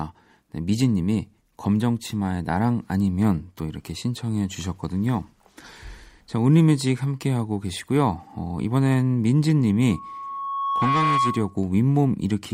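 At 9.88 s a loudspeaker feedback squeal starts and runs until 11.63 s. The microphone is picking up the loudspeaker it feeds, and at 1.1 kHz the loop gain exceeds unity, so that frequency reinforces itself on each pass. It is heard as a single steady tone that swells over about a second, reaching roughly the same level as the speech.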